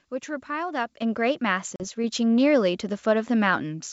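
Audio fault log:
1.02 s and 2.04 s: microphone volume stepped up. The call software judged the microphone too quiet and raised its input gain in single steps, about 7 dB and then about 3 dB, so the speech and the background noise both jump louder together.
1.76 to 1.84 s: packet loss on an ADPCM call. About 40 ms of audio, a couple of packets, became silence, leaving a sharp-edged gap. Afterwards the decoder's predictor and step size no longer match the sender's, so the speech resumes with brief distortion before settling. Around it, the G.722 wideband coding keeps its clear top end.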